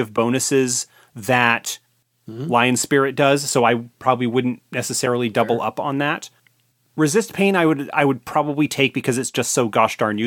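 No technical faults are audible anywhere in the recording, and the signal holds steady throughout.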